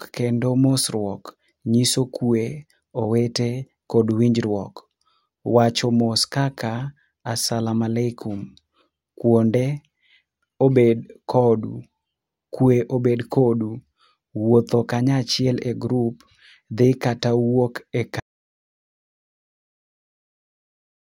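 At 18.2 s the speech cuts off abruptly into dead digital silence, with no room tone, lasting to the end: an audio dropout to silence, likely from input lost while recording continued.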